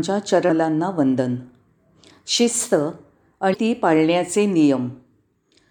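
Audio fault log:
0.46–0.50 s and 3.52–3.56 s, damaged data in a compressed stream: each is a brief chirp, squawk, click or short hole of roughly 40 ms that breaks into the speech. Corrupted bytes in the encoded stream at these points made the decoder misread its frames and lose sync. It produced garbled output until it locked onto the next valid frame header, so the disruption stays short and sharp rather than lingering.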